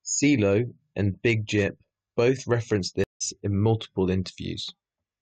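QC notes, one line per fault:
3.04–3.22 s, stream reconnect: the connection dropped and a fresh decoder restarted, leaving 0.17 s of silence after "both referenced". Audio resumes roughly a tenth of a second further on, at "in multiple".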